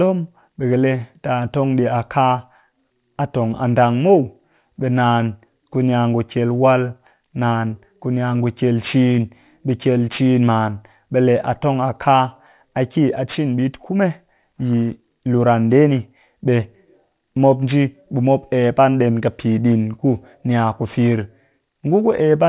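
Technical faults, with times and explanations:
Throughout: aliasing. Sibilants and breathy consonants sound gritty and metallic, with harsh tones that don't belong to the speech, about 30 dB below it. The audio's top band ends sharply at 4 kHz, which fits a drop to an 8 kHz rate without a filter beforehand. Energy above that edge folded back down to wrong frequencies. On a spectrogram, energy runs hard up to 4 kHz with mirrored, unnatural streaks beneath it.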